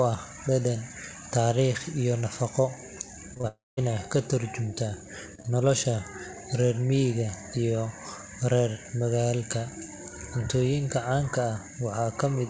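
At 3.34, 3.37 and 3.41 s comes a run of short concealed packet loss: three brief gaps, each about 20 ms, patched by extending the preceding sound. Each leaves a brief smear or wobble.

From 3.47 to 3.79 s a long network dropout follows. The concealment buzz fades and roughly 0.2 s of silence remains before "ka tarjumaysaa nolosha" resumes. This is likely a stretch where no packets arrived.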